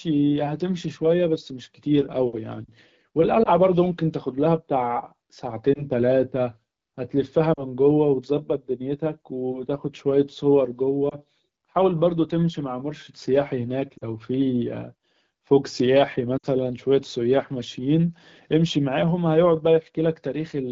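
At 3.44 to 3.49 s, 5.74 to 5.85 s, 7.54 to 7.63 s, 11.09 to 11.15 s, 13.98 to 14.04 s and 16.37 to 16.46 s there are lost AMR speech frames. Radio errors corrupted frames, and the decoder filled each gap by repeating its last good pitch and vocal tract settings at falling gain. The first, second and fourth are brief dips or warbles, consistent with one 20 ms frame each. The third and fifth drop to near silence, pointing to about 40 ms lost. The last loses the most, fitting about 60 ms, and fades before speech returns weak or rough. The AMR wideband (HD Voice) codec underneath sounds clear, which fits a 12.65 kbit/s rate.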